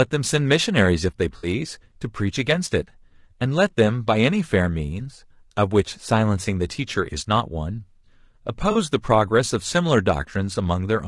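A speech recording with rough, grainy tone throughout, likely from low-delay AAC compression (AAC-ELD) at a bitrate around 32 kbps; a spectrogram shows noise filling between harmonics and a thin top band. AAC frame loss with concealment smears the sound at 1.37–1.47 s and 8.71–8.77 s, visible as blurred, noisy spectral patches.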